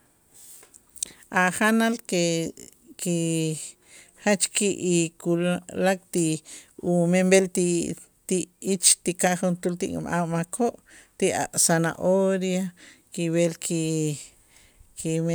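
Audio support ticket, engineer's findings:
Findings: no audio fault found in the speech clip.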